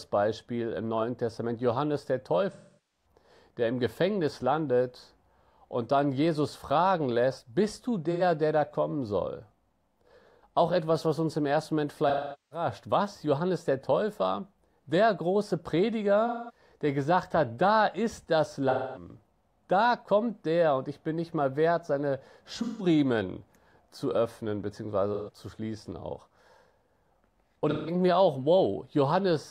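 Speech with AAC frame loss with concealment at 2.52 s (before "der im"), 8.11, 12.08, 16.27 (before "der gesagt hat da"), 18.70, 22.62 (after "nicht mal wert seine"), 25.14 and 27.70 s. Each lasts 85 to 430 ms. The decoder repeats the last good spectrum, so the sound turns smeared and phasey, and the longest gaps fade. On a spectrogram these are blurred, frozen patches.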